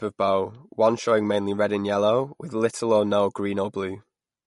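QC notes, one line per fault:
Throughout, MP3 compression: the speech sounds plainly watery and swirly, with smeared consonant attacks and nothing above 11.2 kHz. This is likely an MP3 encode at a low bitrate, near 48 kbps, which drops weak frequency lines. A spectrogram shows a flat ceiling at 11.2 kHz and flickering holes.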